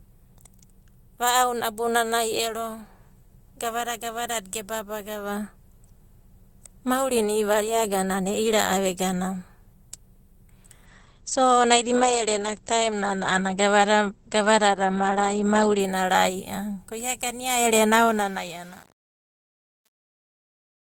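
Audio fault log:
10.86–15.85 s, call bitrate drop: the speech turns coarse and muffled as the encoder rate falls from 32 kbps to 12 kbps, holding its lowest for about 4.9 s. Audio bandwidth narrows from 20 kHz to 8 kHz, removing upper sibilance and air until recovery.
18.05–20.84 s, truncation distortion on a fade: the fade-out beginning around 18 s is at its worst from 18.05 s, as the waveform collapses into coarse steps. The gritty quiet tail fits an 8-bit gain stage applied without dither.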